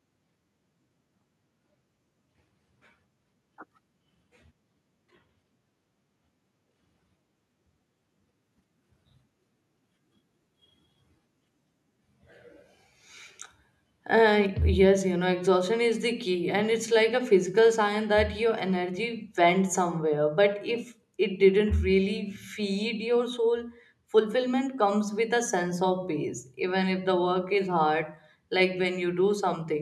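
At 14.46 s, just before "yes you know exhaustion", the whole signal drops by about 2 dB in one step. This is likely a microphone volume stepped down by the call software.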